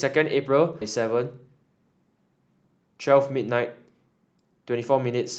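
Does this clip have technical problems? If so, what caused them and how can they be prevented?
Yes, there's a skip ahead at 0.81 s: roughly 0.7 s of speech vanishes, likely dropped by an overflowing jitter buffer, so playback jumps straight forward. A larger, adaptive jitter buffer that drains gradually instead of discarding chunks would prevent it.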